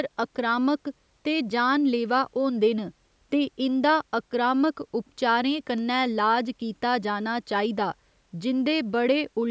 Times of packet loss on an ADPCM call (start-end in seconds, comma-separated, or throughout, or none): none